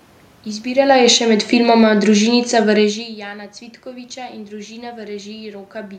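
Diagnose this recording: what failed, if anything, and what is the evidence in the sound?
Automatic gain falling, in the call processing stage. From 0.71 s to 3.04 s the level sinks by about 8 dB. The room noise sinks with the speech. The gain control judged the input too loud, or its background noise too strong, and eased its gain down. Near 0.5 s and 3 s the talker moves, which changes only the voice.

Automatic gain rising, also in call processing. Between 1.17 s and 1.61 s the level swells by about 4 dB. Speech and room noise rise together. Inside the longer fall, the gain control briefly judged the input too quiet and pushed its gain up.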